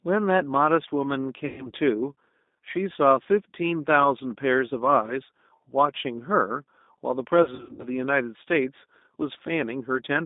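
A speech clip carried through the G.729 codec, most likely the G.729A variant. The codec models each 10 ms frame with a vocal tract filter, a pitch predictor and a few pulses, and the line passes only about 200 Hz to 3.7 kHz. The result is a narrowband, audibly rough and synthetic sound, consistent with an 8 kbit/s stream. Twice, VoIP packet loss concealed by the speech codec takes over. From 1.46 to 1.72 s, about 120 ms of audio goes missing, which fits six 20 ms packets. From 7.43 to 7.89 s, about 240 ms is lost in gaps scattered over roughly 400 ms, the longest of them 80 ms. In each gap the decoder repeats its last pitch and filter at falling gain. This smears the sound into a fading buzzy tone or coloured noise, and because each frame builds on the one before, the sound stays weak or distorted for a moment after real packets resume.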